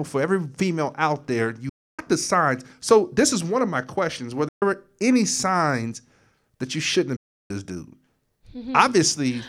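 A likely Bluetooth dropout cuts the speech three times: from 1.69 to 1.99 s, right after "every female out there"; from 4.48 to 4.62 s, just before "any signs that you"; and from 7.16 to 7.51 s, after "signs that you shouldn't". Each gap is silence lasting about 290, 130 and 330 ms, where packets arrived too late and were discarded. Speech then resumes further along, as though it kept playing unheard.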